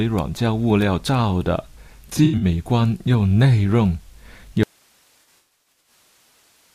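From 2.08 to 2.45 s, AAC frame loss with concealment drops about 192 ms of frames scattered over 341 ms, the longest gap around a tenth of a second. The decoder patches each gap from the last good spectrum, leaving smeared, noisy, phasey speech. At 4.63 s the signal path likely breaks, causing an audio dropout to a faint residue: speech cuts out abruptly, leaving only hiss about 40 dB down until the clip ends. Within that gap, from 5.19 to 5.92 s, further AAC frame loss removes about 427 ms spread over 725 ms, with the longest run roughly 150 ms.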